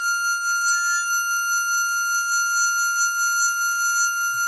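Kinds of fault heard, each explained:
HE-AAC compression: The treble sounds rebuilt rather than recorded, gritty and metallic, with nothing above 11.8 kHz. The heavy damage likely comes from HE-AAC at a very low bitrate.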